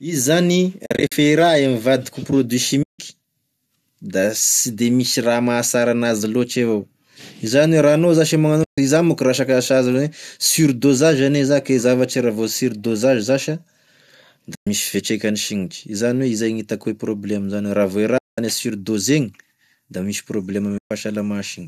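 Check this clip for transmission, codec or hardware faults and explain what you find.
The speech has six short muted gaps from AAC frame loss with muting, at 0.86 to 1.12 s, 2.83 to 2.99 s, 8.64 to 8.78 s (just after "ra anao zash e"), 14.55 to 14.67 s, 18.18 to 18.38 s and 20.78 to 20.91 s. The gaps last 120 to 200 ms. The first is broken up, with several small holes spread over about 260 ms and the longest run near 50 ms. Lost frames are decoded as silence, and the overlapping windows fade the sound down and back up, so each hole has soft edges. That soft fade is what separates it from a hard dropout. The gap lengths fit the roughly 10 ms frames of the low-delay AAC stream, which likely comes from AAC-ELD.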